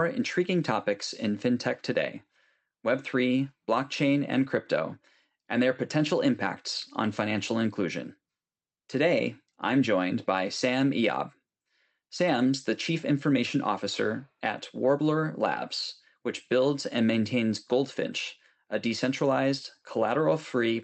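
A speech recording with no technical faults to report. It has been through a call path whose high end stops at about 8 kHz, which fits the Opus codec used on WebRTC calls.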